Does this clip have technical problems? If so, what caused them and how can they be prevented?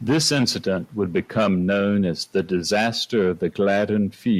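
No, the signal holds steady throughout, with no technical faults to point to and so nothing that needs preventing.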